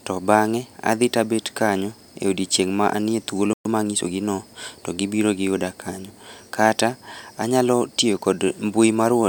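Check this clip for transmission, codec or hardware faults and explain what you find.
Two linked faults occur in this speech clip, both just after "odiechieng' ma anie thuolo".

A playback stall runs from 3.53 to 3.65 s. The player most likely ran short of buffered data or had its output thread blocked, so nothing reached the output for 120 ms. The speech cuts off mid-flow into a brief silence before resuming.

A time-compressed catch-up follows from 3.65 to 4.13 s, ending before "gi no to gibiro". To work off the backlog left by the stall, the player removes small segments and cross-fades the joins, running at 1.25 times normal speed. The speech sounds rushed but keeps its pitch.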